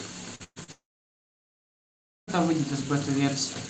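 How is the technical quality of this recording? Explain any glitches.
The stretch from 0.35 to 2.3 seconds of this speech recording is badly damaged by a run of network glitches that leave holes in the signal. The audio, carried over a call path with Opus coding and a cut-off at 8 kHz, is clean again only after that.

Short concealed packet loss hits at 0.35 to 0.43 s and again at 0.64 to 0.71 s. Each time about 40 ms failed to arrive, and the receiver extended the preceding sound to cover it, leaving a brief smear or wobble before normal audio resumes.

A burst of packet loss follows from 0.44 to 0.59 s. About 120 ms went missing in a row. The receiver stretched the last sound and faded it, so a held buzz or hiss decays into roughly 50 ms of silence before the audio picks up further along.

From 0.72 to 2.30 s the sound collapses: a short fading continuation of the last sound gives way to about 1.5 s of silence, and roughly 1.56 s of material is simply gone when the audio returns. 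This is likely a long network dropout, where nothing reached the receiver and concealment ran out.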